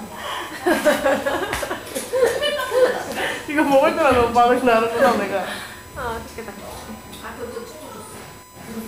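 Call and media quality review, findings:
Steady fixed-pitch whine at 1 kHz, around 25 dB below the sound, throughout. USB whine: 1 ms bus frame current leaking into the audio through power or ground.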